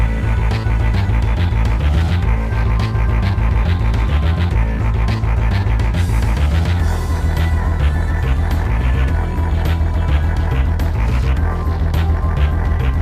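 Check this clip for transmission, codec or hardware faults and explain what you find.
No faults turn up when checking this clip.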